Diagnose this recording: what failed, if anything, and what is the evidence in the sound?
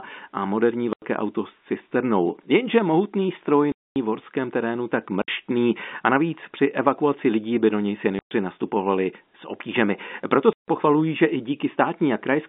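Packet loss filled with silence at 0.93, 3.72 (just after "mohutný stroj"), 5.22, 8.19 and 10.53 s, a network fault. Holes of 90, 240, 60, 120 and 150 ms are all multiples of 30 ms, which fits 30 ms packets. The receiver inserted silence, so each gap drops abruptly with hard edges.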